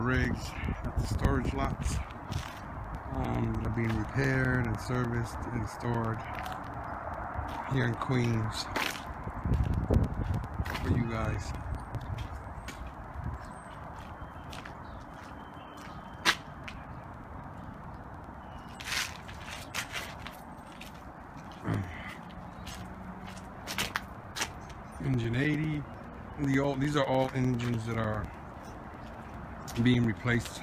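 The audio carries periodic USB or driver dropouts from 0.15 s to 30.55 s. Every 0.1 s, roughly 4 ms is replaced by silence, around 300 times, giving a steady ticking. On a waveform these show as short flat gaps, and on a spectrogram as evenly spaced thin vertical broadband lines.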